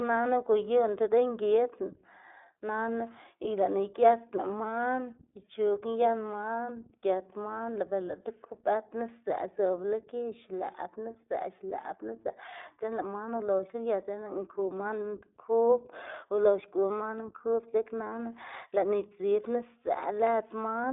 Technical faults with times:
0.00-20.93 iLBC codec

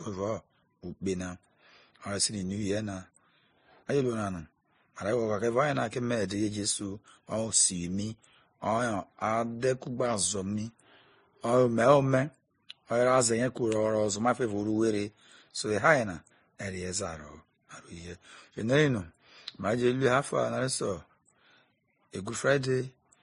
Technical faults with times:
0.00-23.23 transcoding between lossy codecs

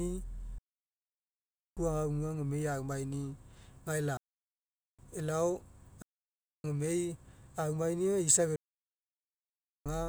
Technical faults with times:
0.58-1.77 digital wireless dropout
4.17-4.99 digital wireless dropout
6.02-6.64 digital wireless dropout
8.56-9.86 digital wireless dropout

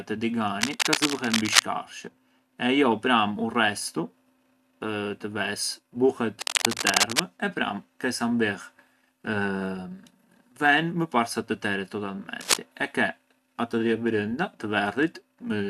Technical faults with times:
0.61-1.62 cable scratch noise
6.40-7.20 cable scratch noise
12.41-12.57 cable scratch noise

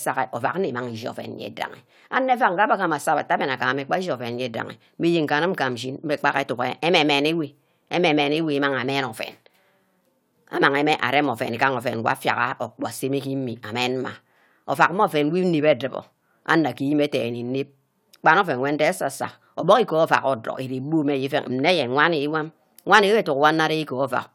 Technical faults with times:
none

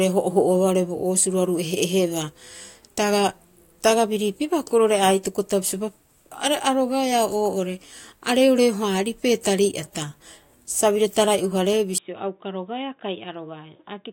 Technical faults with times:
11.98-14.12 input switched to a poorer device

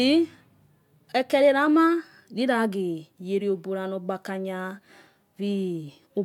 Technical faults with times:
none

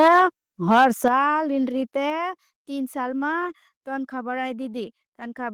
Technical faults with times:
0.00-0.21 microphone overload
0.08 microphone volume stepped down
0.72-1.08 microphone overload
1.08 microphone volume stepped down
2.10 microphone volume stepped down

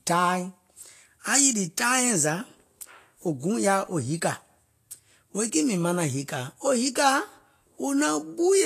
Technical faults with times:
0.00-8.65 Vorbis compression

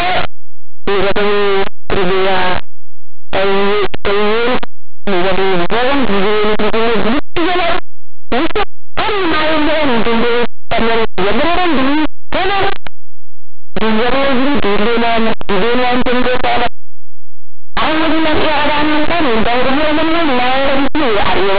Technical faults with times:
0.00-21.58 linear audio read as companded

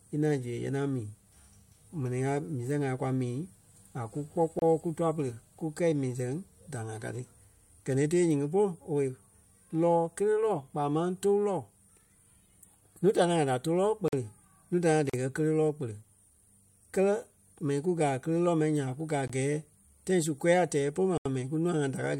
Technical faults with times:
4.59-4.62 block of digital silence
14.08-14.13 block of digital silence
15.10-15.14 block of digital silence
19.28-19.30 block of digital silence
21.18-21.26 block of digital silence

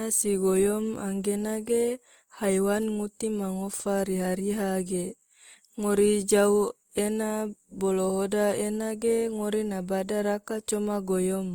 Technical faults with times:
0.00-11.55 Opus compression

